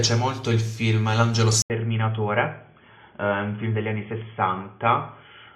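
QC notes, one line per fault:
1.62 s to end, input switched to a poorer device: after an 80 ms gap, the sound turns boxy and dull with nothing above 3.4 kHz, drops about 5 dB, and picks up a faint new noise floor. Likely a change to a narrower-band input.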